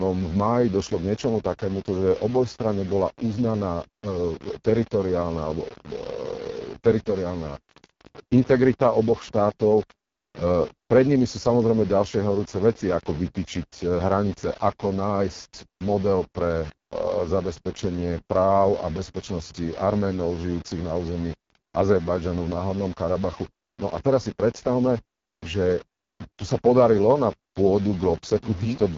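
Low bit depth without dither runs through the whole recording: the speech carries a grainy, gritty distortion that tracks its level, sitting at roughly 20 dB below the signal. The likely cause is rounding to very few bits, something near 5, with no dither to decorrelate the error.

AMR wideband (HD Voice) codec damage is also present throughout, and it is heavy. The speech sounds rough and raspy, and nothing reaches above 7.2 kHz. That fits the codec's lowest mode, around 6.6 kbit/s, where its pulse-driven vocal model has too few bits to reproduce the voice cleanly.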